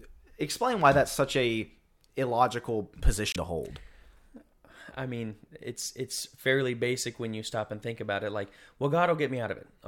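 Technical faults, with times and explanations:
3.32–3.36 s, Bluetooth stall: speech drops to 24 ms of clean silence rather than a click or garble, likely because interference delayed packets until the buffer emptied.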